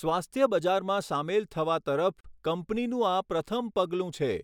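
A speech clip with a gap at a join of encoded pieces: a 39 ms silence at 2.21 s, where separately encoded segments were concatenated without trimming encoder delay and padding.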